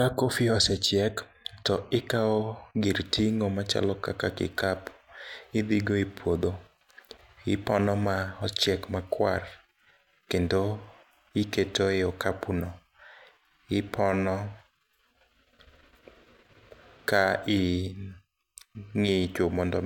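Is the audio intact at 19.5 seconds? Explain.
Yes, the speech at 19.5 seconds comes through intact, with no dropout, distortion or other fault at that moment.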